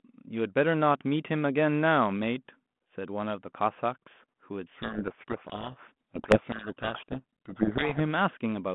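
From 4.74 s to 8.01 s the speech is buried in harsh distortion. This is a codec payload misread. The G.726 code words arrive with their bit order reversed, so the decoder takes each small difference value from the wrong bits. Its adaptive prediction then tracks nonsense, and the error compounds sample by sample. The line still sounds narrow, about 150 Hz to 3.4 kHz, as 32 kbit/s G.726 should. The rasping noise continues until 8.01 s.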